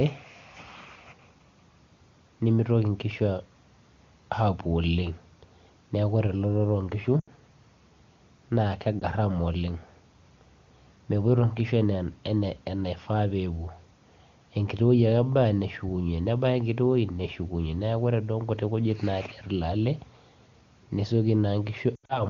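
Speech, coded with the AMR wideband (HD Voice) codec, which sounds clean and fits its highest rate. Lost AMR speech frames cause dropouts at 7.2 s, 9.0 s and 21.95 to 22.23 s. The decoder stretches the last good frame with falling gain. The sound dips or drops to near silence for about 20 to 120 ms.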